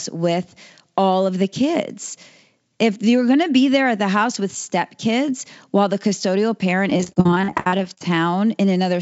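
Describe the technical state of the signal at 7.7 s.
At 7.7 s you're in the middle of a burst of repeated packet loss running from about 6.90 to 8.01 s. Around twenty gaps, the longest 58 ms, get patched by stretching the last sound. Roughly 40% of that stretch is filled-in audio, so it comes out choppy, with pieces missing.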